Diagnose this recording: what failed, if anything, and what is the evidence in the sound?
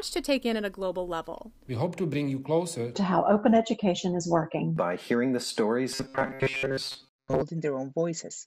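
From 5.93 to 7.42 s the sound turns rigid and metallic, with a fixed 134 Hz buzz over it. That's robotic sound from repeated short buffers, likely a starved buffer stage replaying 7.5 ms chunks while most of the real audio is skipped.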